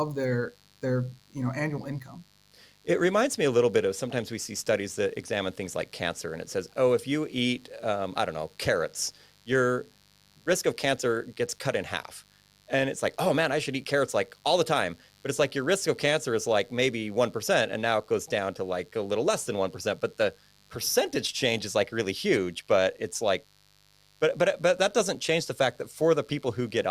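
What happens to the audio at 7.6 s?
At 7.6 s the speech carries a mains buzz. It is not a local event. The buzz runs steadily from start to end of the clip, so this moment sounds the same as the rest. It is a raspy, constant hum sitting well below the speech. Sharp switching spikes from the 50 Hz supply leak into the signal, two per cycle. That gives a 100 Hz pulse rate, with harmonics stretching up to several kHz.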